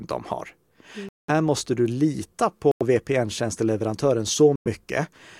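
Three dropouts cut the speech to silence: 1.09 to 1.30 s, just before "måste du lita", then 2.71 to 2.82 s and 4.56 to 4.67 s, about 0.1 s each. Each cuts out and then picks up again, pointing to a likely Bluetooth stall, with the headphone buffer emptying while delayed packets were resent.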